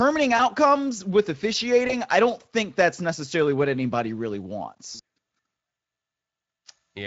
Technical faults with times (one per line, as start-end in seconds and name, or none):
0.37-0.41 VoIP packet loss concealed by the speech codec
1.87-1.94 VoIP packet loss concealed by the speech codec
4.95-5.00 VoIP packet loss concealed by the speech codec